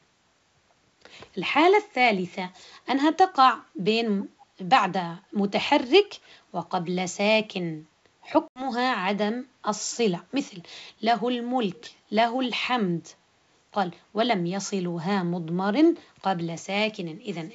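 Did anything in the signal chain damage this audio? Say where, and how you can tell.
Yes. Echo leak, at 4.41 to 4.45 s and 11.75 to 11.85 s, occurs at the call-processing stage. A very faint copy of the speech, around 30 dB down, returns 281 ms late in brief scraps. This is likely a loudspeaker echo canceller on the far end letting residual pickup through.

Packet loss on an ADPCM call, at 8.48 to 8.66 s, occurs at the network stage. An 80 ms hard-edged silence, which points to a few consecutive lost packets, is followed by speech returning slightly distorted. The decoder's predictor and step size lose sync with the sender's and take tens of milliseconds to realign. The G.722 wideband coding at 64 kbit/s carries the speech up to 7 kHz with faint upper-band hiss.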